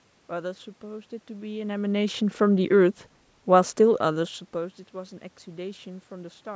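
No technical faults can be heard in this speech recording. Some room noise sits in the background, and the voice shifts in level around 1.5 s and again near 4 s as the talker moves relative to the microphone.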